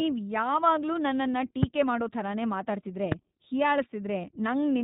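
This speech clip was passed through the narrowband iLBC codec, which fits its 15.2 kbps mode with 20 ms frames. Nothing above 4 kHz survives, and the voice sounds plainly rough and synthetic. Packets carrying lost iLBC frames went missing at 1.34 s and again at 4.23 to 4.25 s, each consistent with a single 20 ms frame. The decoder filled each gap by repeating the last pitch cycle mixed with noise, which is heard as a brief buzzy held vowel before the voice returns almost at once. A loud pop, likely from a voltage step such as a plug, switch or static discharge, hits at 1.63 to 1.65 s, just before "ಮಾಡೋ ಥರನೇ ಮಾತಾಡ್ತಿದ್ರೆ", and again at 3.12 to 3.14 s, just after it. Each is a single sharp crack far louder than the speech, which continues underneath.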